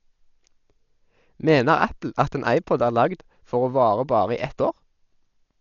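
Dolby Digital compression damage runs through the whole speech clip, from start to finish. Nothing comes through above 7 kHz, and the heavy damage points to a starved bitrate around 48 kbps, likely from an AC-3 style encoder. With too few bits, it narrows the band and leaves many frequency lines without mantissa data, and the decoder fills them with dither noise. The speech sounds dull and muffled, with a rough, fluttering hiss clinging to voiced tones.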